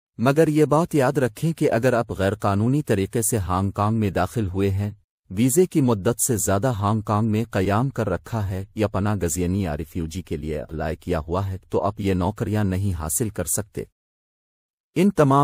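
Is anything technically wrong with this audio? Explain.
No, nothing stood out as technically wrong on listening to this audio.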